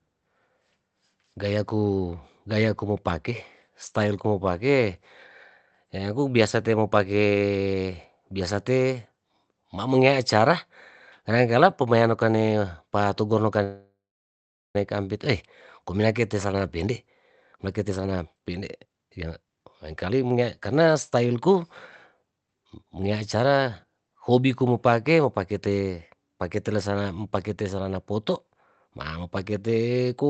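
At 13.63 s, right after "pamean no kane patugu", a call audio freeze sets in. It was likely caused by delayed packets draining the jitter buffer. The last sound stretches into a fading buzz, then about 0.79 s of silence, and "kampit oyy" resumes at 14.76 s. On a spectrogram this looks like a smeared band decaying to blank; the waveform goes flat. Nothing is lost, but the speech is delayed by about 1.1 s.

Three jitter buffer speed-ups follow as the receiver sheds that backlog by cutting pitch-period slices. The first runs from 16.33 to 16.91 s at 114% speed. The second runs from 17.56 to 21.64 s at 121%, removing about a second. The third runs from 22.23 to 23.6 s at 110%. Pitch stays the same but the speech sounds hurried. The spectrogram shows compressed syllables with unchanged harmonic spacing, and all of it sits within the Opus call path's 8 kHz band limit.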